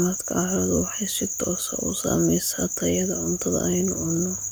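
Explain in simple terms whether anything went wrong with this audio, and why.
Nothing went wrong that I could hear: listening through the whole recording, no part of the speech stood out as damaged or out of place.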